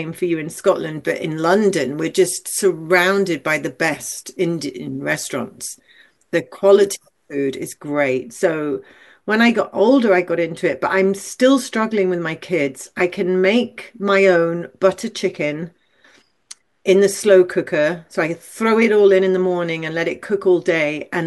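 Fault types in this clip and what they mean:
Pre-emphasis left on: from 0.68 to 7.74 s the speech turns thin and hissy, with treble about 11 dB too strong at 10 kHz, because the boost was never undone. A rise starting near 3.2 kHz fits the FM 50 µs curve, unlike a broad tilt or clipping distortion.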